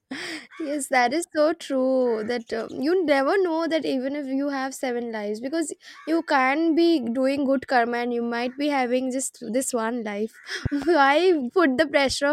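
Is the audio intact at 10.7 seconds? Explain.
No. From 10.66 to 10.85 s a loud pop sounds twice in quick succession, peaking roughly 10 dB above the speech, which continues underneath. It is likely a voltage pulse from a plug, switch or static. Expect two tall waveform spikes and two vertical broadband stripes on a spectrogram.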